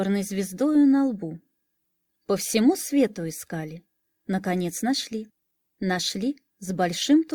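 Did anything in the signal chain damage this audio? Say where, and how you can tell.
No, nothing in the chain shows audible damage: there are no dropouts, clicks, distortion or level jumps anywhere in the signal.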